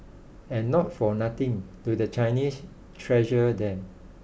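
No technical faults can be heard anywhere in the speech.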